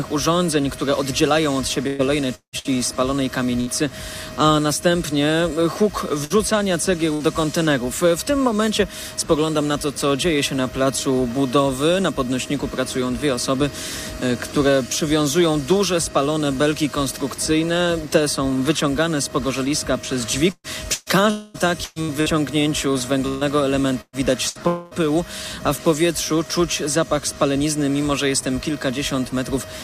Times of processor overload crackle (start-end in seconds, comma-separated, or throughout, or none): none